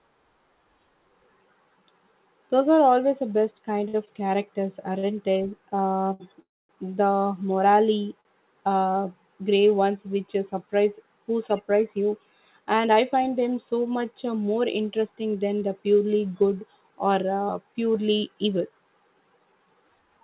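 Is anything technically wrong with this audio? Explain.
Yes. The speech, which has nothing above 4 kHz as expected from a narrowband telephone-style call codec, has four kinds of playback fault.

Repeated stalls (stutter), 3.88 to 6.22 s: packets arrived late six times, and each time the jitter buffer ran dry and the receiver extended the last sound. Together these fills add 185 ms, the longest 63 ms, about 8% of that stretch. Nothing is lost, but the speech drags and stutters.

Call audio freeze, 6.42 to 6.71 s: the receiver stretches the preceding sound briefly, and it then drops to silence for about 240 ms, 275 ms of inserted time in all. Speech resumes where it stopped. The likely cause is packets held up in transit, emptying the jitter buffer.

Short stall from a late packet, 8.21 to 8.27 s: a single packet missed its playout time, so the last sound was held 43 ms longer than it should be, with a slight buzz or dip, before continuing unchanged.

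Jitter buffer speed-up, 12.73 to 12.97 s at 114% and 18.46 to 20.20 s at 111%: after an excess of buffered audio built up, the receiver cut out short pitch-period slices, roughly 40 ms and 200 ms respectively. Pitch stays the same, but the speech sounds hurried.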